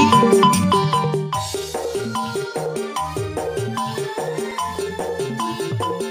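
From 3.78 s to 5.49 s there is a run of CD scratch ticks: eight short clicks, each lasting at most a few milliseconds, spaced at roughly four per second. A scratch or blemish on the disc surface corrupts more data than the error correction can reconstruct, and the damaged area passes the laser once per revolution. Each time, the player patches over or silences the unrecoverable samples, which leaves a brief tick repeating at the rotation rate.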